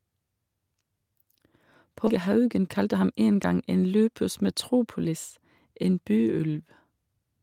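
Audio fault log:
2.07–2.09 s skip ahead: about 0.4 s of speech was dropped while later audio waited, so playback jumps forward with no gap and the two sides are spliced together.
2.17–3.52 s jitter buffer speed-up: the overfull buffer trimmed short pitch-period pieces repeatedly, roughly 150 ms in all, so speech runs at 111% speed at unchanged pitch and sounds hurried.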